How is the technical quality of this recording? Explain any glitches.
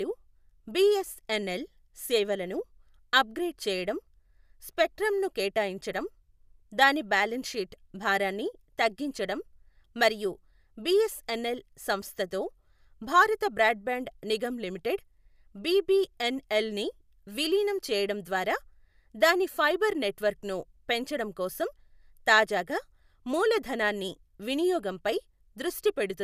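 No technical faults or glitches turn up anywhere in the recording, so there is nothing to explain.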